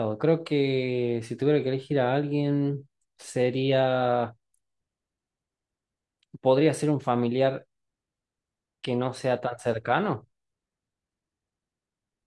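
No technical fault can be heard anywhere in the recording: the level holds steady, the signal stays continuous, and nothing from the capture or transmission chain intrudes on it.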